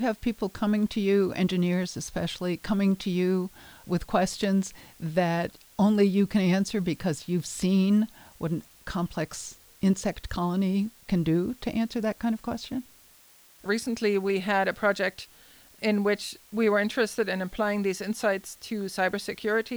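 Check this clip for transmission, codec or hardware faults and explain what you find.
One fault runs through the whole speech clip: low bit depth with dither. The audio is reduced to 8 bits with dither added before rounding, leaving a constant, even hiss about 30 dB below the speech. Unlike undithered truncation, it doesn't add gritty distortion that follows the speech.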